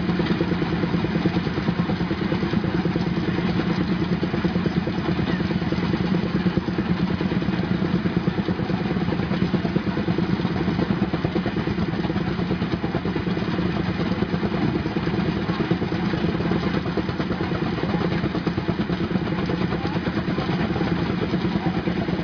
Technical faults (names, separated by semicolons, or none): none